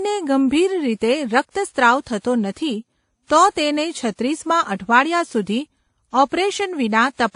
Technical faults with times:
0.00-7.36 transcoding between lossy codecs

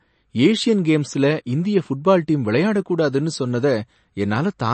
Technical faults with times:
0.00-4.74 MP3 compression

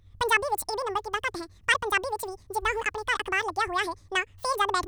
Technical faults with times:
0.00-4.87 audio read two samples at a time (double speed)

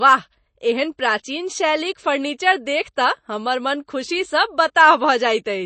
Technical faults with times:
0.00-5.65 MP3 compression

